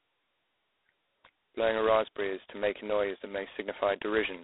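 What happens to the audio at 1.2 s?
At 1.2 s the speech carries G.726 ADPCM damage that runs through the whole clip. The codec sends only a coarse difference from its own prediction of each sample; at a rate that fits 16 kbit/s, about 2 bits a sample, the errors become a harsh, rasping hiss. Unlike steady background noise, this hiss rises and falls with the speech level. The sound sits in a 300 Hz to 3.6 kHz telephone band, with nothing above 3.9 kHz.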